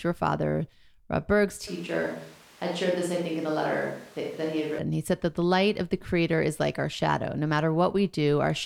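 Speech that, from 1.67 s to 4.79 s, suddenly turns roomy and hollow, loses bass, drops a few decibels and gains room noise near 25 dB below the voice, then snaps back. Likely cause: a switch to a distant microphone after the close one dropped out.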